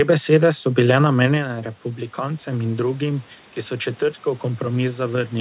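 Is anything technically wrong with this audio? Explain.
Yes. From 1.3 to 4.08 s the speech and the room noise behind it swell together, slowly climbing by about 4 dB instead of jumping. This is automatic gain rising. Around 1.5 s the talker moved away and the level at the microphone fell by about 11 dB; the gain control took that as a too-quiet input and raised its gain gradually. Because it amplifies everything, the background rises in step with the voice.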